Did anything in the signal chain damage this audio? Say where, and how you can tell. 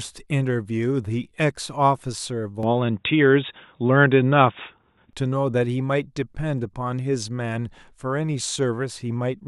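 Yes. From 2.63 to 5.13 s the speech turns boxy, capped at 3.8 kHz, with a small level change and faint new background noise: likely the input switched to a poorer device.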